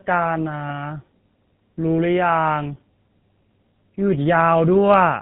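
Throughout, the speech sounds rough, muffled and warbly, with nothing above 3.9 kHz. This is tandem speech coding: two speech codecs in a row, the second re-encoding the first's degraded output.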